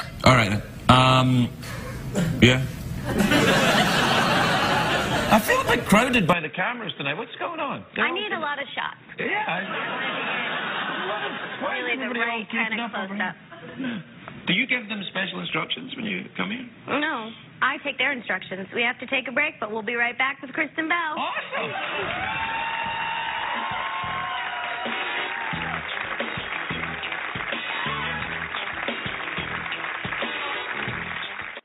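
From 6.33 s, with no gap, the sound turns dull and quieter, cut above 3.8 kHz, with a faint new noise floor: likely an input switched to a poorer device rather than simple filtering.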